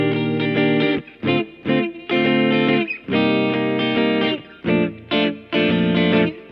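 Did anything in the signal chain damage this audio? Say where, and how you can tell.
No, nothing in the signal chain audibly damaged this audio; no stage from capture to playback has left a mark on the signal that a listener can hear.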